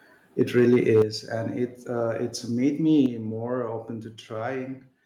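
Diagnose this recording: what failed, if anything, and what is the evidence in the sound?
The converter stage failed first: from 0.41 to 1.02 s, just before "and it", the loudest peaks crackle harshly, likely from microphone overload driving the input about 4 dB past full scale and flattening a couple of percent of samples. Codec distortion would smear more evenly, without this edge confined to peaks.

Call processing then stepped the microphone volume down at 1.02 s, about 8 dB, right before "and it", and again at 3.06 s, about 5 dB, before "more open". Voice and background drop together in one instant step and stay down, which likely points to automatic gain correction, not a gradual compressor or fade.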